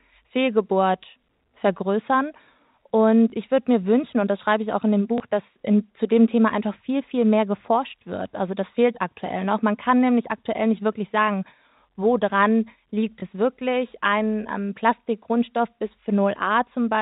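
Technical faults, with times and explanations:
3.30–3.32 s, 5.18–5.20 s and 13.20–13.22 s, packet loss with last packet repeated: each is a small blip in the speech, a 20 ms slice heard twice. One packet went missing each time, and the receiver filled the gap by replaying the previous 20 ms. The speech is carried in the narrow telephone band of the G.711 coding, which stops at 4 kHz.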